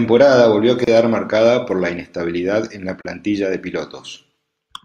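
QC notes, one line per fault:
0.84–0.87 s, gap at a join of encoded pieces: speech cuts to silence for 30 ms after "volvió a" and resumes at "marcada por la inestabilidad". Separately encoded pieces were joined without trimming the encoder's start delay and final-frame padding.
3.01–3.05 s, gap at a join of encoded pieces: a 39 ms silence with smeared edges follows "la inestabilidad en la", then speech carries on. The cause is the same untrimmed encoder delay and padding at the join.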